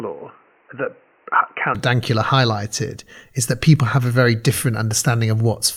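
From the very start until about 1.75 s the speech sounds narrow and boxy, with nothing above 3 kHz, a quieter level (roughly 5 dB down) and a new noise floor sitting fairly far below the voice. Then it opens up with no gap at the changeover. That's most likely an input switched to a poorer device, such as a headset call profile, before the recording settled onto the better microphone.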